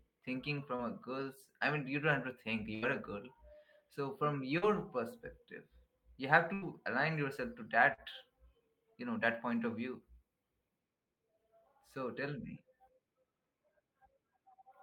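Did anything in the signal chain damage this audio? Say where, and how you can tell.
Yes. The network stage. Short concealed packet loss appears at 0.75 to 0.82 s, 4.58 to 4.65 s and 7.94 to 8.01 s. About 40 ms of speech arrived too late each time. The decoder extended the preceding sound for 32 to 40 ms and blended back, leaving a brief smear or wobble.

Also in the network path, a burst of packet loss hits at 2.75 to 2.85 s and 6.54 to 6.65 s. Each drops about 80 ms. Concealment stretched the last sound for 74 and 80 ms while fading it, giving a held buzz or dying hiss before speech resumes further on.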